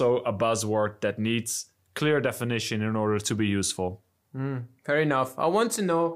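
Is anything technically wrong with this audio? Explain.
No, nothing stood out as technically wrong when listening to this speech recording.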